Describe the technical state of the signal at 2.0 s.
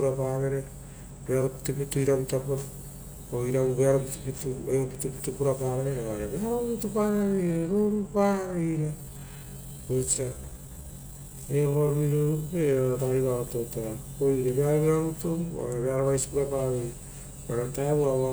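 At 2.0 s the signal is intact, with no audible fault at that moment.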